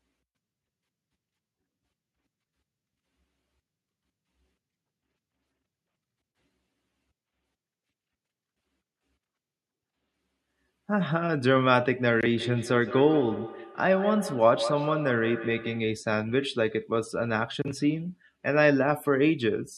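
From 12.38 to 15.97 s the speech comes back on itself, each phrase repeating roughly every 150 ms, peaking at about 10 dB below the speech. This is feedback echo between two devices: a second device replays the first's sound into its microphone, and neither echo canceller removes it.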